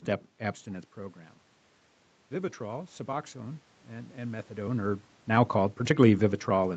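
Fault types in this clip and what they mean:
Automatic gain rising: The gain control heard the input fall by about 15 dB and slowly turned itself up. From 2.29 to 4.57 s the speech and the room noise swell together, by about 4 dB, over more than two seconds.
Automatic gain falling: The gain control judged the input too loud, or its background noise too strong, and eased its gain back down. From 4.69 s to the end, the speech sinks gradually, with the room noise sinking right along with it.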